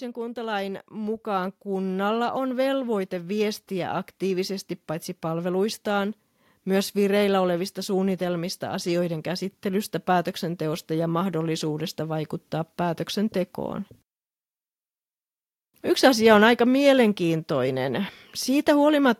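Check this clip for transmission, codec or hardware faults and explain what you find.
One fault stands out: automatic gain rising at the start. From 0.14 s to 4.6 s, the level climbs steadily by about 12 dB. The automatic gain control judged the incoming speech too quiet and kept turning its gain up. It did this slowly, over several seconds, not in one step. Because the gain acts on the whole signal, the voice and the background noise swell together. The rise settles just before "paitsi palveluistaan myös vireillä".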